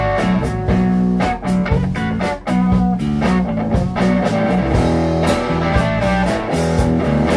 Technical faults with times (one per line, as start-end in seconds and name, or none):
none